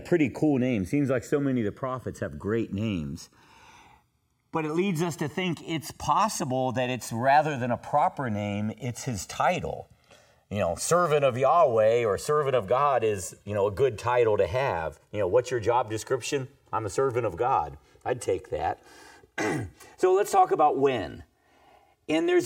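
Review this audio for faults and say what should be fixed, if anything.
Channels drifting apart runs throughout. The two channels sit on separate clocks, and the offset between them creeps up to about 3 ms by the end, which fits a clock mismatch of around 100 ppm. In a mono sum, comb notches drift slowly downward across the spectrogram as the delay grows, heard as slow flanging. Prevent it by locking both recording devices to a single shared word clock.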